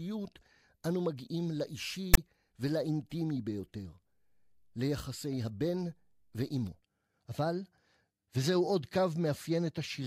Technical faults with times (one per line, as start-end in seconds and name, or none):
2.14-2.18 file tags played as audio